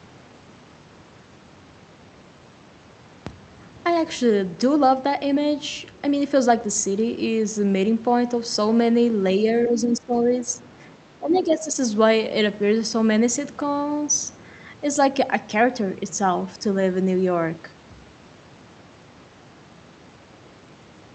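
Speech suppressed in double talk, from 9.66 to 10.62 s and again from 11.2 to 11.78 s: the speech dips by roughly 15 dB in the first stretch and about 10 dB in the second. This is likely an echo canceller turning down everything when it couldn't tell the near talker from loudspeaker echo.

The other side's voice is leaking through at 10.33 to 10.39 s, faint at around 25 dB below the speech, and at 11.32 to 11.36 s, stronger at about 15 dB down. These are brief scraps, likely residual loudspeaker echo the canceller failed to remove from the microphone. Both leaks fall inside the suppressed stretches, with the top end of the audio limited to about 8 kHz by the call codec throughout.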